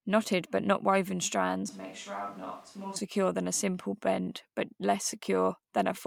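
At 1.69 s the speech suddenly goes roomy and hollow, loses its bass, drops roughly 10 dB and picks up more background noise, then snaps back at 2.96 s. That's a switch to a distant microphone, likely because the close mic's signal dropped out.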